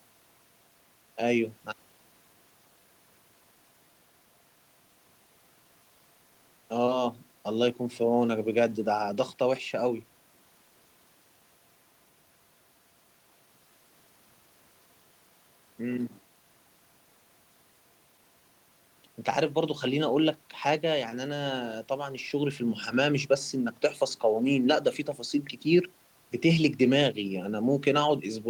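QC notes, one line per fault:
No faults found; the only background is room noise sitting about 38 dB below the speech.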